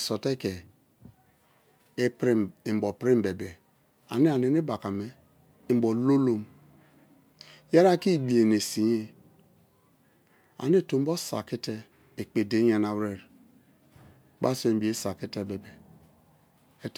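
No technical faults are audible.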